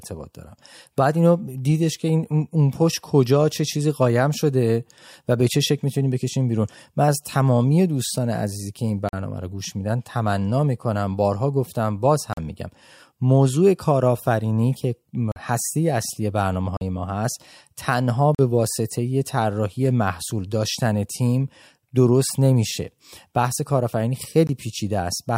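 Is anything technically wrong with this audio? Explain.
Yes. The speech has blocks of digital silence at 9.09, 12.33, 15.32, 16.77 and 18.35 s, each about 43 ms long, and a shorter one at 24.47 s. The output buffer likely went unfilled in time, fitting a 2048-sample buffer. The sound cuts out abruptly, leaving short holes.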